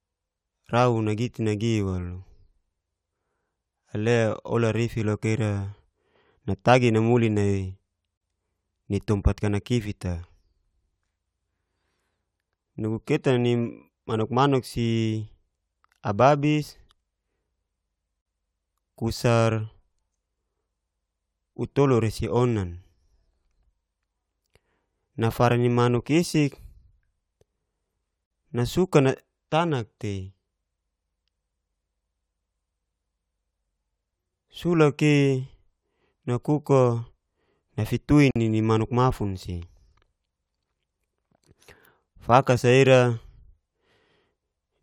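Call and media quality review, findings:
Brief dropouts in continuous speech, with smeared edges, speech resuming where it stopped: 8.17–8.21 s (40 ms), 18.21–18.26 s, 28.26–28.31 s, 38.31–38.36 s (48 ms each), spaced 10 s apart. Gap at a join of encoded pieces in the encode/concatenation stage. Stream encoded in 10 s segments and joined untrimmed, so each segment's encoder start delay and last-frame padding survive as silence at every boundary.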